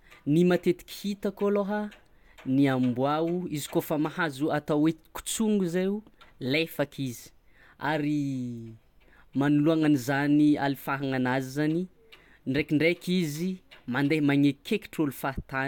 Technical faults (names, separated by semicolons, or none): none